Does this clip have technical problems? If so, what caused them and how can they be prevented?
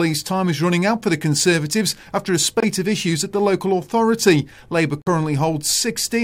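Yes: corrupt frame muted, with abrupt silent gaps at 2.60 to 2.64 s (between "after a" and "of issues at the") and 5.02 to 5.08 s, about one and two frames long. Damaged compressed frames were rejected and replaced with silence, so timing holds, unlike a dropout that shifts timing. Error-checked transport or retransmission would prevent it.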